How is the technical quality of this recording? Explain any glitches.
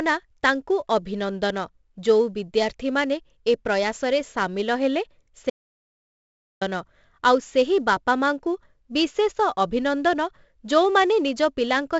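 The technical quality is poor. The speech carries heavy coding damage from start to finish, and there is one complete dropout near the middle.

4-bit ADPCM compression affects the whole recording. Each sample is coded as a coarse 4-bit step from a predicted value, so the quantisation error rides along at a fixed distance below the signal. Loud syllables pick up a gritty hiss, and sharp onsets distort where the step size lags behind. Nothing is present above 7.7 kHz, which dulls the top end. This all fits a 64 kbps ADPCM stream.

An audio dropout to silence runs from 5.5 to 6.61 s, removing about 1.11 s of speech. The signal stops abruptly and resumes just as abruptly. The gap is silent, with no room tone or hiss, so the speech in that stretch is simply gone. The likely cause is an input interruption, such as a disconnected device, a failed link or an accidental mute, while the recorder kept writing silence.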